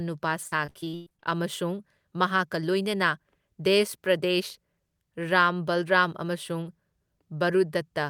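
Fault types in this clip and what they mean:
Repeated packet loss (robotic sound): From 0.47 to 1.27 s the speech breaks up into about a dozen short holes, the longest around 111 ms. Each hole is covered by stretching the last bit of sound, so nearly half of this stretch is synthetic fill. Even so, pieces of the speech are missing. Because the losses come so close together, the speech turns choppy with a robot-like quality until the stream recovers.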